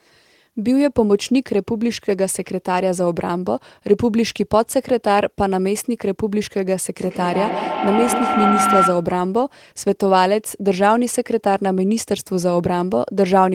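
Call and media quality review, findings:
Feedback howl, 6.96 to 9.13 s. Narrow tone near 1.5 kHz, loop repeat about every 150 ms, rising to about speech level. Probable component: two devices on one call in one room. Mic-to-speaker loop gains level each pass.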